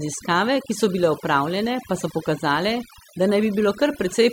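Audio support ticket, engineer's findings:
Overdone noise removal, whole clip. Noise reducer set far too aggressive: bands near its noise estimate pulled down or gated off frame by frame, quiet speech energy cut along with the noise. Result: background dropped and broke up into twinkling, chirpy specks. Fix: back off reduction depth, re-process from the unprocessed source.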